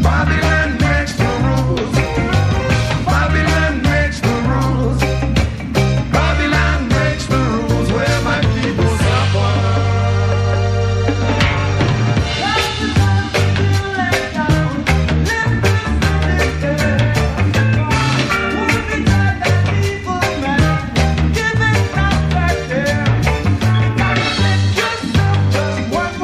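No technical faults can be heard anywhere in the audio, and the signal stays steady and intact throughout.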